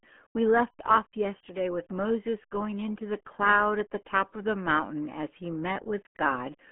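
From start to finish, the speech has passed through the RealAudio 14.4 codec, the RealAudio 1 format built for dial-up modems. The encoder squeezes it into a tiny data budget, which fits an 8 kbit/s stream, and keeps only a narrow band from about 200 Hz to 3.4 kHz, with nothing above 3.8 kHz. The coding damage is heavy: the voice comes out muffled and gargly, with a thin, boxed-in tone.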